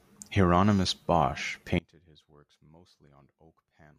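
From 1.79 s to the end, the speech falls by about 28 dB to a faint residue. One channel inverted is the likely cause, cancelling the shared centre in mono. Unlike a plain volume drop, only a small difference signal survives.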